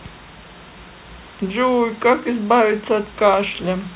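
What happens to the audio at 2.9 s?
Nothing goes wrong at 2.9 s: the speech carries on intact through that moment, with only the faint room noise well beneath it and the narrowband sound of the call path, which stops at 4 kHz.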